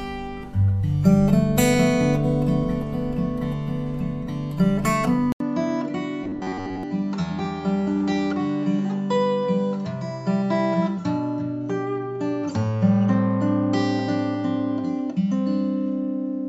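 At 5.32 s the sound drops out for 80 ms. When it returns, it is duller and boxier. The level falls by about 5 dB. A faint new background noise sits far below the signal. This change holds to the end of the clip. The likely cause is that the input switched to a poorer device, such as another microphone or a headset's call profile, with its own narrower band, tone and noise.

From 6.24 s to 6.83 s the sound turns into a rigid, metallic buzz. It keeps a fixed pitch of 93.8 Hz, which points to a repeated chunk about 10.7 ms long. Most of the real audio in this stretch is skipped. This is robotic sound from repeated short buffers. New audio likely arrived too seldom, so the software kept replaying the last short buffer to fill the gap.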